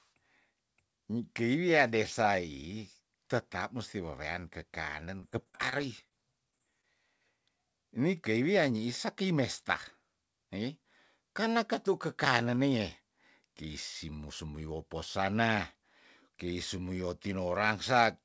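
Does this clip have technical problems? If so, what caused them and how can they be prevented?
Yes. Between 5.20 and 6.13 s there is repeated packet loss, which gives a robotic sound. Seven gaps, the longest 38 ms, were patched by extending the previous sound, so about 16% of that stretch is synthetic. On a spectrogram this shows as repeated smeared, over-regular harmonic patches, and the waveform has periodic copied cycles. A more stable network path, or forward error correction and redundancy on the call, would prevent it.

Short concealed packet loss occurs twice, at 6.51–6.54 s and 6.58–6.72 s. Each time about 20 ms of audio never arrived and roughly 14 ms was filled in, leaving a brief smear or wobble. The spectrogram shows a short blurred slice where fine detail vanishes. Packet redundancy or a less congested link prevents this.

A short stall from a late packet follows at 6.81–6.85 s. 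The jitter buffer ran dry, so the last sound was held for 20 ms until the packet arrived, adding 20 ms of delay without losing any audio. The waveform shows a stretched, repeated segment and the spectrogram a briefly frozen band. A slightly deeper or adaptive jitter buffer prevents this.

Nothing is present above 8 kHz, which fits a wideband call codec such as G.722.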